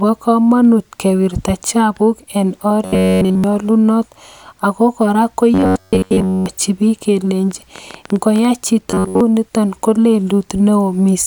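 A speech clip in which audio likely reached the playback software too seldom, so it looped a buffer of roughly 11 ms, producing robotic sound from repeated short buffers: a rigid 93.8 Hz metallic buzz from 2.85 to 3.44 s (entirely looped, right after "komonut kewirta chapuk en"), then 5.54 to 6.46 s and 8.91 to 9.21 s (mostly looped). A likely interference pulse or faulty connection causes a train of clicks from 7.51 to 8.46 s: about ten irregular pops, roughly 10.7 per second, peaking about 5 dB above the speech.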